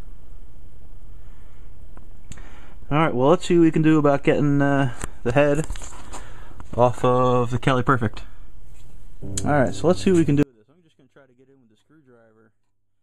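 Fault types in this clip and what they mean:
One channel inverted: from 10.43 s to the end of the clip the level falls by about 38 dB, leaving only a faint remnant. The likely cause is one stereo channel with reversed polarity, so the content common to both channels cancels when they are summed to mono.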